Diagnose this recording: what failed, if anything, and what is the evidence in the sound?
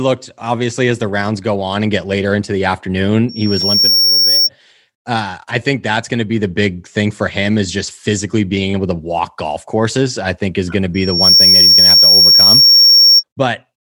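Loudspeaker feedback squeal at 3.29–4.49 s and 10.94–13.24 s: the loudspeaker-to-microphone loop exceeds unity gain at 5.5 kHz, so that tone swells above the speech.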